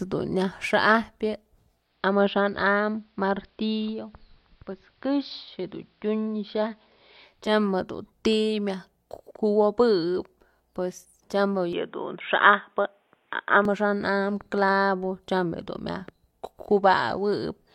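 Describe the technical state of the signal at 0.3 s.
The signal at 0.3 s is intact, with no fault present at that moment.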